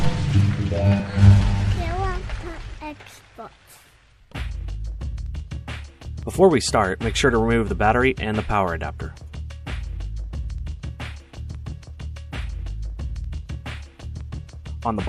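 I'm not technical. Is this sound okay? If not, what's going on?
Yes, this sound is okay; there's nothing going on that needs fixing.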